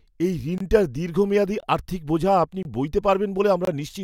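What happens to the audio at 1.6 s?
A gap between chunks opens from 1.60 to 1.63 s: the speech was handled in 1-second pieces, and a 23 ms silence interrupts it at the join.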